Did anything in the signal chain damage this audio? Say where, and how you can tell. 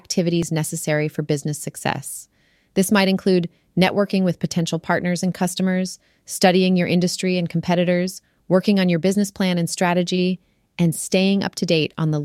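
Yes. There's overlap between stream segments at the streaming stage. You hear two tiny skips, each about 14 ms. One is at 0.43 s, right before "necessary for business success", and the other is at 10.37 s, just after "business plan and strategy". Two segments' timestamps overlapped, and the player trimmed that overlap from audio that wasn't actually duplicated. A sliver of sound disappears and the waveform jumps, which fits segments cut at roughly 2-second boundaries.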